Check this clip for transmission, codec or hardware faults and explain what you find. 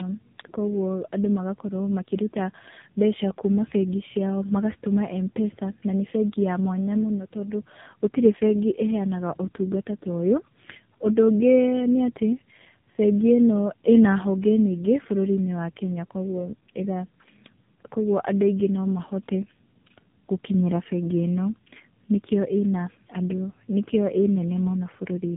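Tandem speech coding affects the whole clip, start to finish. The speech appears to have crossed two separate speech codecs in a row, with each stage decoding the previous one's output and re-encoding those accumulated errors. The sound points to a GSM full-rate leg, a G.711 mu-law transit, and a final low-rate AMR-NB leg. The result is rough, muffled, warbling speech that is harsher than any single link would produce, with nothing above 3.8 kHz.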